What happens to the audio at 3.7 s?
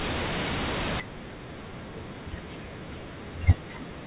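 Nothing goes wrong at 3.7 s: the speech carries on intact through that moment, with only the steady narrow band of its A-law telephone coding, which cuts everything above 4 kHz.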